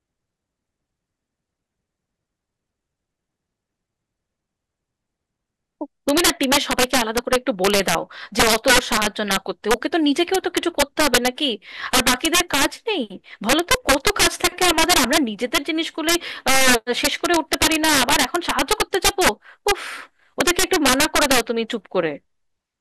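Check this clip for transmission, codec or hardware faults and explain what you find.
There's one fault, running the whole way through the speech: integer overflow. The level sits about 10 dB too hot, and roughly 2 percent of samples exceed the integer limit and wrap to the opposite sign instead of clamping. Each loud peak becomes a violent crack, far harsher than ordinary clipping.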